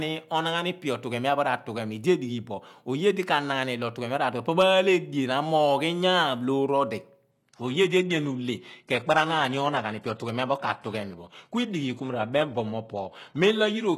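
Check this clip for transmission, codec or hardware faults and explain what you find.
One fault is present: the stream drops to a lower bitrate partway through. From 7.31 s to the end, an adaptive stream at a lower bitrate takes over. The player, likely reacting to a slowing connection, switched to a leaner encoding with no gap in playback. The sound which fits a move from 96 kbit/s AAC to 16 kbit/s HE-AAC. Treble above 12.3 kHz vanishes and codec artefacts thicken abruptly.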